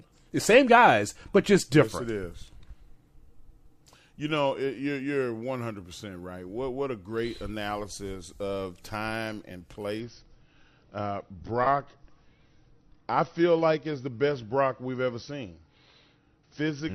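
At 10.0 s the adaptive stream falls back to a lower bitrate until the end, a sudden step that fits a switch from 96 to 32 kbit/s AAC. With no gap, the speech loses everything above 6 kHz and codec artefacts rise.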